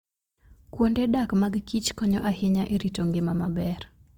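From start to end the speech sounds grainy and rough rather than swirly, and the treble still reaches 20.2 kHz. This is likely Opus compression in CELT mode, fitting a bitrate near 24 kbps.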